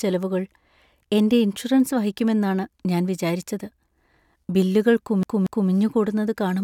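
A CD stuck on one turn appears at 5.23 s and holds until about 5.70 s. A scratch throws the laser back one track at the same point on each rotation, so a slice of speech roughly 0.23 s long plays twice in a row, each restart preceded by a brief mute where the jump lands. The result is the quick, evenly spaced stutter of a skipping disc, freezing the speech in place near the end before it carries on.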